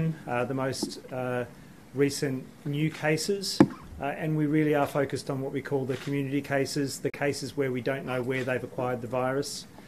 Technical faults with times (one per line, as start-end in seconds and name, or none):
7.10-7.16 Bluetooth dropout